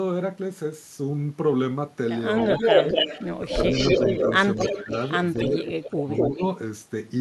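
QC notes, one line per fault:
2.37–6.43 s, echo leak: a copy of the speech returns about 247 ms late and sits roughly 5 dB above it, likely because a far-end loudspeaker's echo canceller let the pickup through. On a spectrogram, harmonic bands repeat, offset by a quarter second.
3.45–3.51 s, 4.69–4.92 s, 5.36–6.42 s, speech suppressed in double talk: the talker's level collapses by about 10, 10 and then 20 dB, the last dip lasting most of a second, likely the canceller ducking both talkers during overlap. The waveform shows notched, hollowed envelopes, with the spectrogram darkening there.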